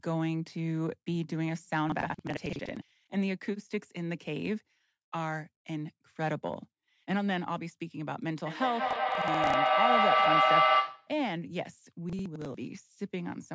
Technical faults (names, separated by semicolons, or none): processor overload crackle; feedback echo between two devices